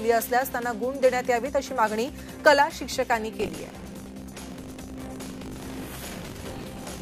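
From 3.38 s to the end, there's buffer tearing: the writer and the hardware reader have drifted and cross inside every period. A sliver, roughly a tenth of each buffer, replays audio about 40 ms stale, giving a steady 50 Hz rattle over the sound.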